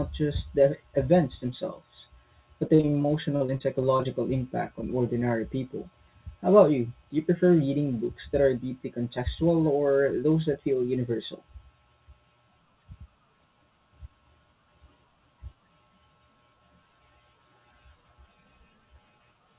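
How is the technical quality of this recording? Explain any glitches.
The recording has two packet-loss glitches, both early in the clip. It is narrowband throughout, with nothing above 4 kHz, which fits a G.711 A-law call path.

Repeated packet loss (robotic sound), 2.68 to 4.07 s, right after "the events themselves but": a dozen or so gaps of up to 40 ms were each patched by extending the previous sound. About a fifth of that stretch is filled-in audio, which makes it choppy and robotic.

Short concealed packet loss, 4.81 to 4.84 s, just before "ordinary people": about 20 ms of audio went missing and the receiver continued the preceding sound to fill the hole, leaving a brief smear or wobble.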